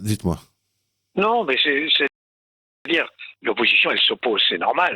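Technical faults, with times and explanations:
2.07 to 2.86 s, rebuffering stall: the sound drops abruptly into silence for about 0.78 s, then picks up exactly where it broke off, with nothing skipped. The player ran out of downloaded audio and waited for more, adding time rather than losing any.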